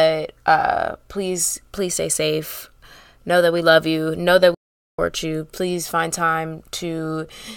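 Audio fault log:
4.54–4.99 s, playback stall: the speech cuts to silence for 439 ms, likely the player running dry of data or its thread getting blocked, then picks back up.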